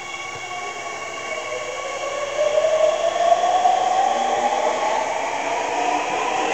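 No technical faults can be heard in these everyday sounds at any point.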